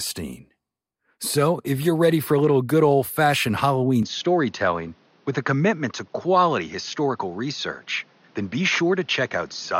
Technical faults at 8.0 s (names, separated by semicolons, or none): input switched to a poorer device